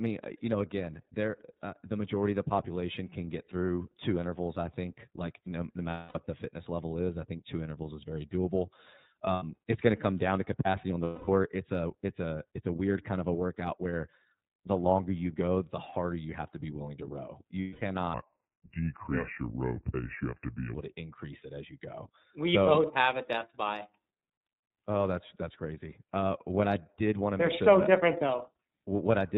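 Across the whole clip the speech sounds narrow and slightly rough, with a synthetic edge and nothing above 4 kHz. That is the iLBC codec. It is a narrowband VoIP coder that rebuilds each frame's excitation independently, and the damage here is plainly audible. The character fits iLBC's 13.33 kbps mode with 30 ms frames.

Four times the speech turns into a held, faintly buzzy vowel before snapping back. These are lost iLBC frames. The first runs from 5.90 to 6.19 s, about 240 ms, after "think like no no" and before "the fitness level is". The second, from 9.33 to 9.43 s, lasts 90 ms, just before "it's going to come". The third runs from 11.03 to 11.28 s, about 240 ms, between "down to capacity on" and "it's a it's a". The last runs from 17.61 to 17.82 s, about 210 ms. In each gap the decoder repeated the last pitch cycle blended with noise. Because every frame stands alone, the speech recovers almost immediately.

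From 18.14 to 20.75 s the speech drops to a slow, deep drawl, about five semitones lower. This is a section at the wrong speed, playing at 0.746 times the proper rate so that pitch and tempo fall together. It is likely the result of that stretch being fitted to the wrong clock during editing or playback.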